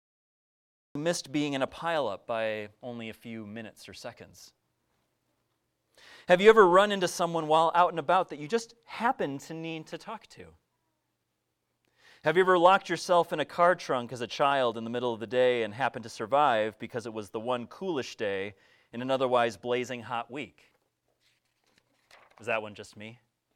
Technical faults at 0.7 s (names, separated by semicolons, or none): cut-off start